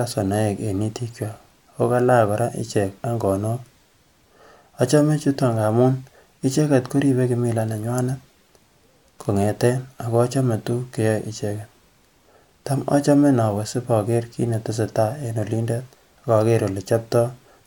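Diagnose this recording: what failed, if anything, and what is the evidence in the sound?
Nothing in the signal chain has failed: the speech arrives intact and continuous, with no audible damage from any stage between capture and playback.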